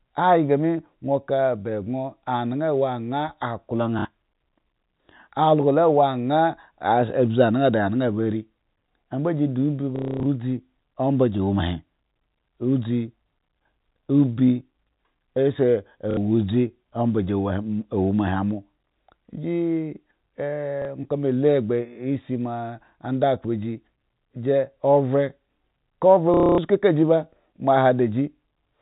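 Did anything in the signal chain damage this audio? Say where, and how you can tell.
Yes, at the network stage: packet loss with last packet repeated, at 3.99, 9.96–10.26, 16.11, 20.82 and 26.34–26.58 s. The repeated chunks fit 30 ms packets, so longer runs buzz near 33 Hz. A spectrogram shows frozen, repeating blocks, and the waveform shows identical cycles.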